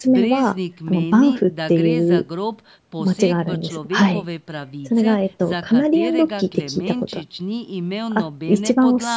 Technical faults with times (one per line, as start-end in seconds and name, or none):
none